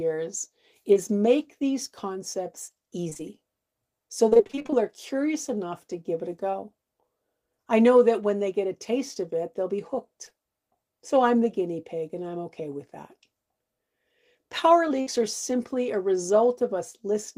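At 0.93 s a short concealed packet loss drops about 20 ms of the speech. The decoder patches the hole by extending the preceding sound and then blends back into the real signal, so you hear only a brief smear or wobble, one isolated event rather than a pattern. The same fault returns at 6.51 s, and twice in close succession around 10.25 to 10.39 s, one of them inside that span at 10.29 s. There the patching also stretches the timing by a few milliseconds.

From 3.09 to 3.21 s there is repeated packet loss, heard as robotic sound. Three gaps of up to 20 ms each are patched one after another, so nearly half of that stretch is synthetic continuation. A longer run follows from 4.29 to 4.83 s, with twelve gaps of at most 23 ms, again about half concealed. Because each patch is followed almost at once by the next hole, the speech turns choppy with fragments missing, unlike the lone smears of the short losses.

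At 15.01 s a burst of packet loss removes about 60 ms in one block, lasting until 15.08 s. Here the receiver keeps extending the last sound while fading it down across the whole gap, giving a held buzz or a dying hiss. The speech then resumes further on with that section gone. It is a single longer dropout rather than a rapid series of tiny ones.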